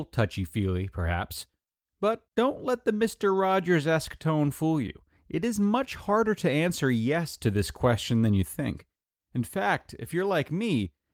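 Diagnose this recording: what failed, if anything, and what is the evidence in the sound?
Nothing stood out on listening to this speech recording that would point to a failure at any stage of the chain.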